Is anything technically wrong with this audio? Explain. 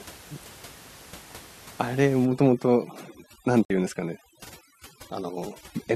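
Yes, two things. From about 2.25 s to the end there's overdone noise removal: the denoiser is set so hard that it pulls individual frequency bands right down whenever they sit near its noise estimate. The room noise, which was sitting about 22 dB under the speech, drops away and breaks up into little twinkling specks, and the quieter parts of the voice get eaten too.

Then at 3.65 s there's a digital broadcast dropout lasting 48 ms, up to about 3.70 s. The receiver lost good frames and muted until clean data came back. You hear a brief hole in the speech, which fits a couple of frames going missing, and whatever was in that gap is simply gone.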